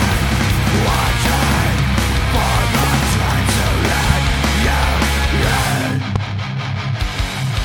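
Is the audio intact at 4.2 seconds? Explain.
No. At 4.10 to 4.33 s, a sudden voltage pulse, likely from a plug, switch, static discharge or driver glitch, lands on the signal. The result is a loud pop, two sharp thumps roughly ten decibels above the sound, which continues underneath.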